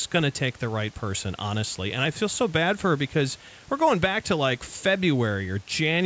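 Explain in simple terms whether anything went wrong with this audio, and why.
Nothing went wrong with this audio: the faint room noise behind the speech and the call microphone processing's trimming of the deepest bass are both normal.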